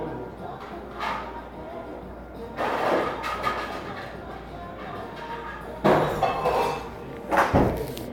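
No technical faults can be heard anywhere in the recording.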